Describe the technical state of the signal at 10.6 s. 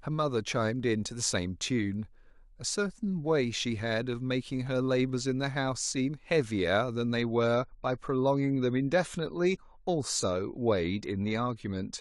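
At 10.6 s the speech carries more codec artefacts. This is an adaptive stream at a lower bitrate, running from 7.21 s to the end: the player dropped to a cheaper encoding, which points to roughly 32 kbit/s AAC, switching suddenly without a gap.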